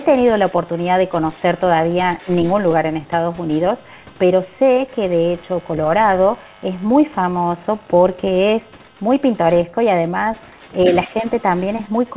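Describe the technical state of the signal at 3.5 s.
At 3.5 s the other side's voice is leaking through, from 3.38 to 4.41 s: a second, very faint voice sits far below the talker, likely far-end loudspeaker sound the echo canceller left in the microphone. It is a different voice, not a delayed copy of the talker as room reverberation would be.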